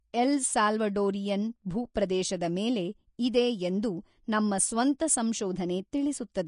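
From the start, the speech has a hard ceiling: nothing is present above 10.5 kHz, and the treble that remains sounds hissy and grainy, with a rough edge on sustained sounds and softened consonant onsets. This is plainly audible codec damage, likely from Vorbis compression at a low quality setting, consistent with a bitrate in the low thirties of kbps. The spectral floor is kept, but fine high-frequency detail is reduced to noise of similar energy.

At 1.94 s there is pre-echo. A sharp attack sits late in a transform block, and the quantisation noise meant to cover the loud part spreads backwards into the quiet moment just before it. The result is a brief hiss of about 11 ms leading into the onset, which makes the attack sound smeared rather than crisp.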